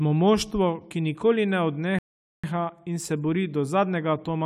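Speech, interrupted by a rebuffering stall from 1.99 s to 2.44 s. The audio drops to silence for about 0.45 s, then picks up at exactly the point where it stopped, with no syllables skipped or repeated. That pattern indicates the player exhausted its downloaded buffer and paused playback until more data arrived. No content is lost, but the stall inserts roughly 450 ms of dead air and lengthens the clip by that amount.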